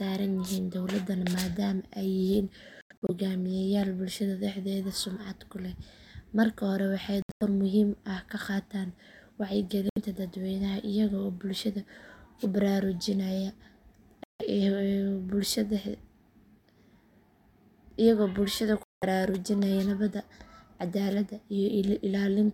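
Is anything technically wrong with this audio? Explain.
Yes. The speech breaks up five times in a way that sounds like a Bluetooth dropout: at 2.81 to 3.10 s, 7.22 to 7.43 s, 9.89 to 9.98 s, 14.24 to 14.42 s and 18.83 to 19.04 s. Each break is a silence with abrupt or briefly faded edges, and the speech resumes further on, as though it had kept playing underneath. The likely cause is audio packets arriving too late at the headphones and being discarded. The first two breaks are ragged, with about 160 ms missing in pieces no longer than about 90 ms each, so they stutter rather than fall fully silent. The third loses about 70 ms, the fourth about 160 ms and the fifth about 190 ms.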